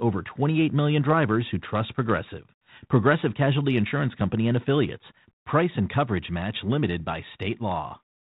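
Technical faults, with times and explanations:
No technical faults are present in this speech recording. The G.726 ADPCM path at 32 kbit/s can be heard as a telephone-band sound with nothing above 4 kHz and only a light, level-following graininess from the coarse sample coding.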